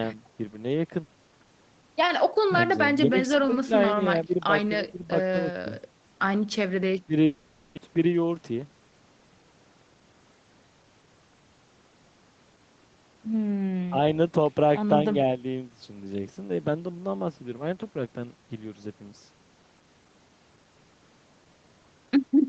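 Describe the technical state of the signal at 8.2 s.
Jitter buffer speed-up runs from 7.87 to 8.79 s, covering the 8.2 s point. After a backlog of audio built up in the receiver's buffer, it drained the excess by repeatedly cutting out short stretches, each one or a few pitch periods long, removing about a tenth of a second in total. The speech plays at roughly 109% speed with its pitch unchanged, so this passage sounds hurried, carried over the 8 kHz-wide Opus call path.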